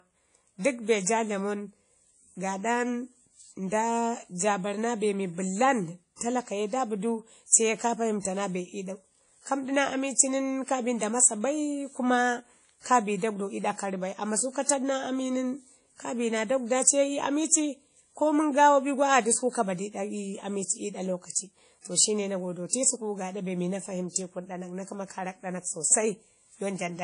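Throughout, a transform codec, likely WMA compression, spreads quantisation noise over long blocks and removes everything above 10.1 kHz. The result is plainly audible washy, ringing damage that fits a bitrate around 32 kbps. From 6.16 to 6.21 s, pre-echo occurs because block-wide noise sized for a sharp attack fills the quiet just before it. About 49 ms of hiss precedes "talaka ye da bidu" and smears its onset.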